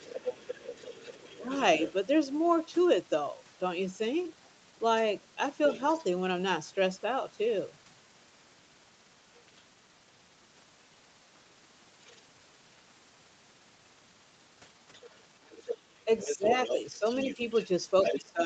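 An echo canceller that likely failed to remove the far end's loudspeaker sound from the microphone lets the other side's voice leak through from the start to 1.92 s, about 15 dB below the talker. At 1.12 to 1.42 s, speech is suppressed in double talk: with both sides active, the canceller likely mistook the talker for echo and turned everything down. The talker's level dips by a few dB in short pieces totalling well under a tenth of a second.

The leak returns more faintly at 5.63 to 6.04 s, around 25 dB down, and as a brief scrap at 12.07 to 12.16 s, about 30 dB down. From 14.94 s to the end it is strongest, only about 10 dB below the talker. From 16.05 s to the end, double-talk suppression cuts the talker hard, by up to about 20 dB. Throughout, the audio is band-limited at 8 kHz, which fits a 32 kbps Opus call path.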